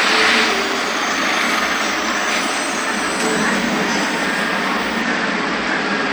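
A Bluetooth SBC bit pool drop starts at 5.02 s and lasts to the end. The link squeezed the encoder's allocation, which fits a fall from bit pool 31 to 12, near 88 kbps, so the upper sub-bands starve: the treble goes dull and gritty noise creeps in.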